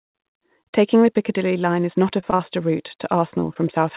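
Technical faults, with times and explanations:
2.20–2.24 s, 2.30–2.34 s and 2.36–2.41 s, short concealed packet loss: right after "is not a", three gaps of about 20 ms each (consistent with single lost 20 ms packets) were patched by extending the preceding waveform, heard as brief smears.
3.31–3.34 s, 3.40–3.44 s and 3.54–3.57 s, short concealed packet loss: three more synthesized patches of 12–18 ms blending back into real audio, producing small wobbles.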